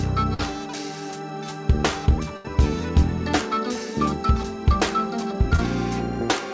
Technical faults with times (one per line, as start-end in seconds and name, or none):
0.34-0.40 burst of packet loss
2.37-2.45 burst of packet loss
5.56-5.59 short concealed packet loss